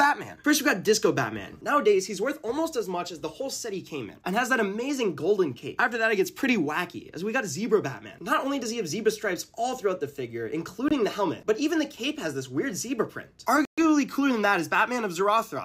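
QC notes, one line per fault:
10.88–10.93 s: Bluetooth stall. Sound cuts to silence for 23 ms, then resumes. Likely the receiver's buffer ran empty while delayed packets were resent.
13.65–13.81 s: Bluetooth stall. A longer gap of 126 ms silence before playback returns. Likely the same buffer starving while waiting for retransmitted packets.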